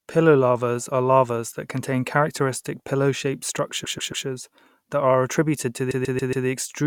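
Speech with two bursts of repeated frames: from 3.83 to 4.25 s the same 139 ms slice plays three extra times, and from 5.90 to 6.46 s it plays four extra times. You hear a stutter. A chunk of compressed frames, which fits a run of about six, got written or sent more than once, adding roughly 0.42 s and 0.56 s to the audio.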